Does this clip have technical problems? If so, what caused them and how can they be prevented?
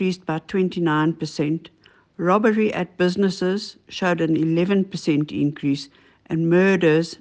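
No, nothing stood out on listening that would point to a technical problem in this clip.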